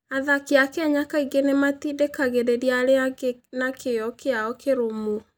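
Nothing in the way of technical faults turns up anywhere in this bit of speech, so there's nothing to flag here.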